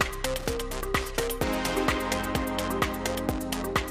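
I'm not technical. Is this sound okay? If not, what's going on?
No. From 0.38 to 0.54 seconds there is a short, rough burst of crackle. This is loose connector crackle. A worn or dirty plug contact is briefly losing touch and reconnecting. That chops the sound into scratchy bits.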